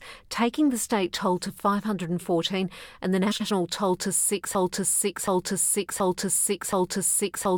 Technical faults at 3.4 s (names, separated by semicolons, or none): frames out of order